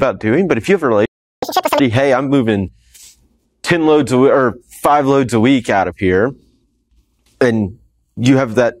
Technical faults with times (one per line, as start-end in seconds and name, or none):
1.05-1.43 playback stall
1.43-1.79 catch-up at higher speed